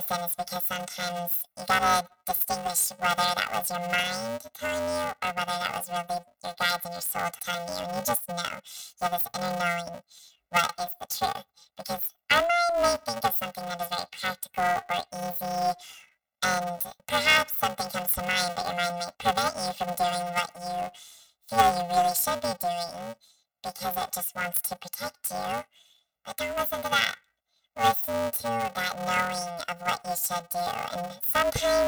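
The clip is speech, and the whole thing carries a robotic buzz from planar audio read as interleaved. The audio was stored with each block holding all its left samples followed by all its right samples, but it was played back as if the channels alternated. Each block gets squeezed to double speed, left half first and then right. The blocks are only about 2.9 ms long, which fits a 128-sample block, so instead of an octave jump you get a steady 345 Hz buzz at the block rate.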